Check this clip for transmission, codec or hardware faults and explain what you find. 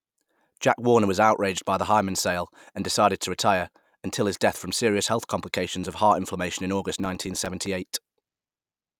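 One fault stands out, a burst of processor overload crackle. From 6.90 to 7.66 s the speech turns gritty and torn, peppered with tiny hard-edged dropouts. The processor is missing buffer deadlines repeatedly, and around fifteen buffers of a few milliseconds each are replaced by silence, so the gaps click as they cut in and out.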